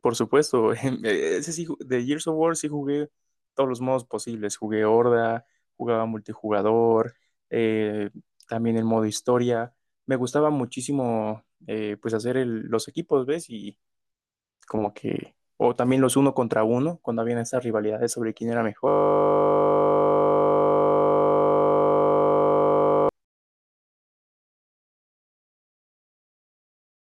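A system hang loop runs from 18.88 s to 23.09 s in this speech. The playback system stalled while the audio hardware kept replaying whatever sat in its ring buffer, so a single 20 ms slice of sound repeats exactly, over two hundred times. Because the slice is so short, the repetition fuses into a steady, pitched buzz at 50 Hz rather than a stutter, holding flat for about four seconds until the audio resumes.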